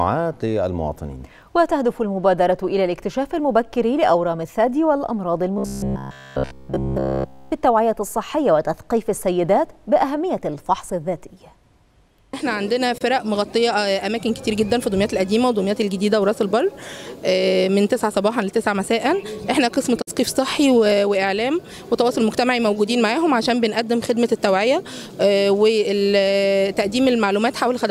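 Robotic sound from repeated short buffers runs from 5.58 to 7.53 s. Across that stretch the audio turns into a rigid, metallic drone with a fixed pitch of 66.8 Hz, and the underlying sound can only be roughly followed beneath it. The likely cause is new data arriving too slowly, so the playback loops a fragment of about 15 ms again and again while the real audio is skipped. That repetition goes on for essentially the whole span.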